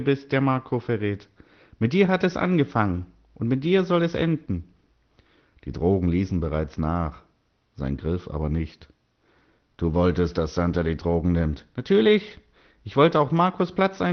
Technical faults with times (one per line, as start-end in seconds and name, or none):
none